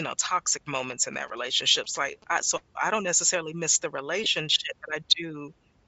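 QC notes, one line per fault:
throughout, Bluetooth LC3 compression: The speech has a breathy, grainy edge, and the upper spectrum sounds hollow and hissy rather than crisp, with detail replaced by a noise-like wash. The likely cause is LE Audio's LC3 transform codec at a low bitrate, which fits around 32 kbps with 10 ms frames. At that rate the encoder zeroes much of the high band and fills it with noise, and that is the damage heard here.
1.13–2.33 s, GSM signalling bursts: Just after "know toxic moments in" and ending before "I so I don't", a galloping dit-dit-dit of short buzzes sits well beneath the speech, about 30 dB down. The buzz repeats at about 217 Hz. A nearby 2G phone was signalling and sent short groups of radio bursts, and the audio circuit rectified them into this buzzing pattern.
4.24–4.26 s, lost LE Audio frames: Right after "don't necessarily miss the", a brief stretch of about 20 ms turns into a noisy smear, so the sound loses its clear structure for an instant. 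This fits two lost 10 ms LE Audio frames. The LC3 decoder concealed the gap by repeating the last spectrum with randomised signs. That keeps the level but scrambles the phase, which is why the sound comes out noisy rather than silent.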